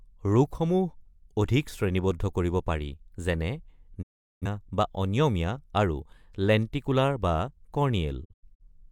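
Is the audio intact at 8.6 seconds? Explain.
No, the speech breaks into short holes with quick 20 ms fades between 8.24 and 8.64 s, a digital broadcast dropout where the receiver muted on failed frames.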